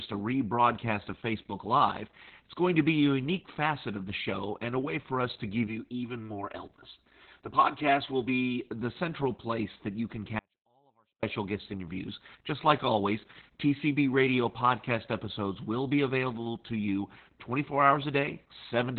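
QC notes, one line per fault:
Throughout: Opus voice compression. The speech sounds muffled, hoarse and slightly robotic, with heavy coding damage, which fits narrowband SILK coding at around 8 kbps. A spectrogram shows a flat ceiling with nothing above about 4.2 kHz and smeared, coarse harmonic detail below it.
10.39–11.23 s: audio dropout to a faint residue. After "place that you can" the speech cuts off abruptly for 0.84 s and returns at "guest interviews". Only faint sound about 40 dB down remains, likely because the signal was lost while the path stayed live. The waveform collapses to a near-flat trace with hard edges.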